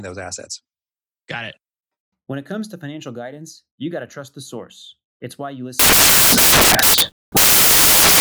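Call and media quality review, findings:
Samples built from the wrong bytes, 5.79–8.21 s, after "source it's why you". The decoder assembles each sample with misordered or misaligned bytes, so the rapidly changing low bits become the most significant part. The audio turns to loud, harsh broadband noise through to the end.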